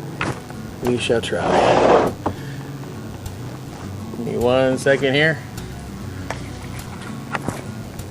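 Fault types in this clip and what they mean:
DECT cordless phone buzz: a thin, steady buzz runs through the whole clip, pitched at 100 Hz and rich in harmonics, sitting roughly 30 dB below the wanted sound. It comes from a nearby DECT handset or base station transmitting a brief radio burst every 10 ms; the audio circuit rectifies those bursts, turning the 100 Hz burst rate into an audible pulse train whose sharp edges produce the dense harmonic series.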